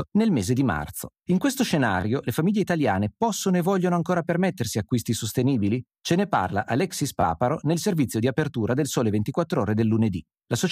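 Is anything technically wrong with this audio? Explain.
Yes, this speech clip has a repeated buffer fault at 2.01–2.03 s, just before "le famiglie italiane possono", and at 7.21–7.23 s, before "nel servizio di apertura". Each time, fresh audio arrived late, so an 11.6 ms block, which fits a 512-sample buffer, played twice more. It is heard as a brief buzzy stutter, with nothing lost. The waveform shows identical copied segments with hard joins, and the spectrogram shows thin vertical lines at each join.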